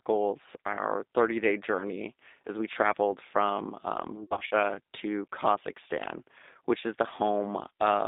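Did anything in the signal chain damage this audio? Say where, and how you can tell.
Yes. Codec stage: a G.729 codec narrows the band to 250 Hz–3.7 kHz throughout. The rough, synthetic timbre fits an 8 kbit/s stream.

Network stage: VoIP packet loss concealed by the speech codec, 4.23–4.55 s, after "we traveled from um". About 160 ms went missing in gaps up to 80 ms. The decoder stretched the sound into a fading buzzy tone or coloured noise.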